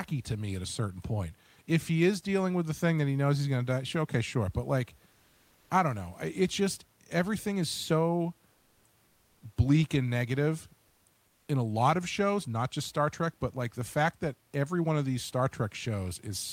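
Likely discontinuous transmission halted the sender from 11.27 to 11.47 s, after "bleak and negative". Comfort noise in place of the background swaps the detailed room noise for steady, featureless hiss about 1 dB quieter.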